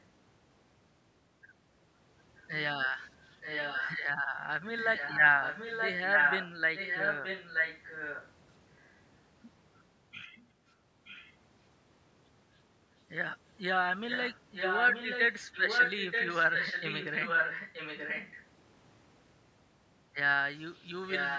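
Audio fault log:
3.41–3.99 s, 4.81–8.29 s, 11.04–11.34 s, 14.1–18.43 s, 21.08–21.39 s: echo leak. The speech returns about 0.93 s late, usually near full level and faint near 11 s. This is likely from a loudspeaker echo canceller that let its own playback through.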